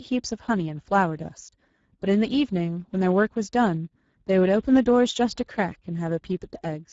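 Throughout the clip the speech has passed through the Speex codec at a low setting, consistent with roughly 10 kbps, which leaves too few bits for the excitation signal. The result is plainly audible hoarse, noisy graininess, and nothing remains above 7.7 kHz.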